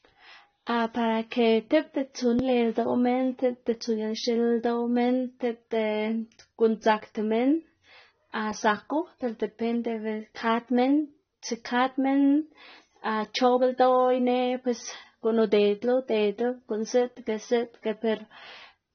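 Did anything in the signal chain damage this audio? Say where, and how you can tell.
Yes. The codec stage has damaged this speech throughout. The highest frequencies are missing, so the top of the spectrum is simply cut off. The sound is dull and smeared, and sibilants turn fizzy and watery. That damage is plainly audible. It points to AAC compression, likely AAC-LC at a low bitrate near 24 kbps. At that rate the encoder lowers its cut-off and quantises the remaining bands coarsely against its hearing model, which produces this texture.

There is also one sharp click at 9.02 s. It shows as a thin vertical line across the spectrum. No sound goes missing around it. The click is likely caused by dropped samples, about one sample lost in the driver or buffer stage. The waveform jumps straight from one value to a later one, and that step discontinuity sounds like a click. The gap is roughly 0.02 ms, far too brief to remove anything audible.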